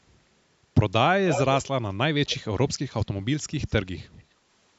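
From 1.26 to 1.67 s a delayed copy of the speech returns 244 ms late, only a little quieter than the original, and a faint scrap follows at 2.26 to 2.37 s, 249 ms late. This echo leak is likely from a far-end loudspeaker that the echo canceller didn't fully suppress. It differs from room reverberation because the copy is distinct and late, not a continuous smear.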